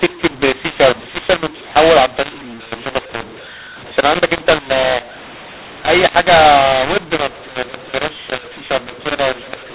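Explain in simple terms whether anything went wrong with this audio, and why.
Throughout the clip, the speech sounds harsh and gritty, as if badly overdriven, and the gaps between phrases are filled with a hiss instead of silence. Loud and soft parts come out at the wrong strengths. The fault is mu-law and A-law mixed up. The telephone audio was packed using the A-law scale but unpacked using the mu-law scale. Because the two scales don't match, every level is mistranslated, and even near-silent moments come out as noise.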